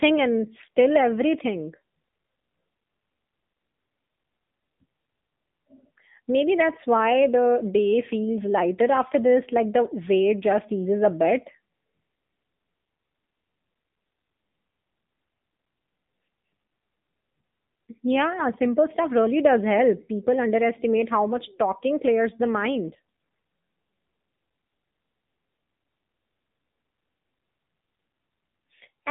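Speech heard through an AMR narrowband mobile codec, its buzzy, synthetic texture fitting a low mode around 7.4 kbps. On a spectrogram, energy sits only between about 150 Hz and 3.7 kHz, with nothing above. Brief AMR bit errors at 0.56–0.68 s, 22.86–23.02 s (just after "much talking clears the") and 24.50–24.56 s make the voice scratchy and gargly while pitch and level hold. Flipped bits misplace the excitation pulses, so the waveform keeps its envelope, and the spectrogram shows smeared, noisy harmonics there.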